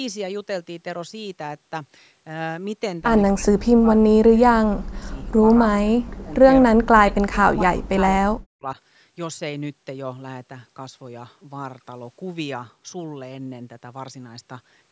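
Speech suppressed in double talk at 3.33–4.57, 4.77–5.42, 5.67–6.33, 6.68–7.36, 7.55–8.01 and 8.26–8.78 s: the voice drops by roughly 40 dB and breaks up, likely because an echo canceller mistook this side's talk, overlapping the far end, for echo.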